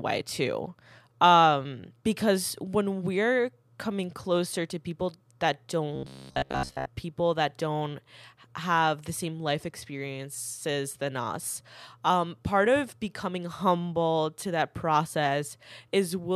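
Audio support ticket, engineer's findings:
Robotic sound from repeated short buffers, 5.96 to 6.89 s, after "closer to people that", before "people that don't have". Rigid metallic buzz near 66.7 Hz over most of the span. Speech contour still roughly traceable. Likely cause: audio input starved, playback looping a 15 ms block while fresh audio is dropped. Buffer or jitter-handling stage suspected.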